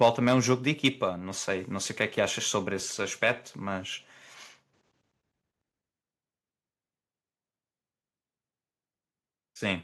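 Speech with microphone overload at 0.01 to 0.52 s, 0.85 to 0.88 s and 3.28 to 3.30 s. Peaks flatten against the converter's ceiling, adding a harsh crackle. The input gain was likely set too high.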